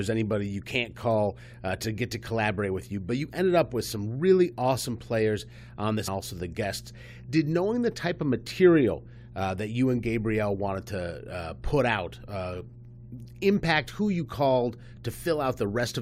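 A steady low 60 Hz tone, roughly 20 dB below the speech, runs through the whole clip: mains hum, from power-line interference coupling into the signal. At 6.07 s the speech jumps abruptly forward with a brief blip, likely a stream segment skipped, where one segment failed to load and playback resumed from the next.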